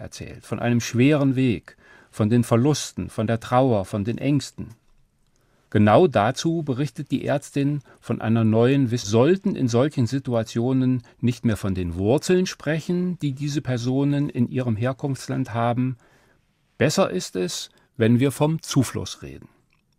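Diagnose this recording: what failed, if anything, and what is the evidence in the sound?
Network/playback stage: around 9.03 to 9.09 s the speech jumps from "von einer neuen" to "in solchen" with a blip, likely a stream segment skipped.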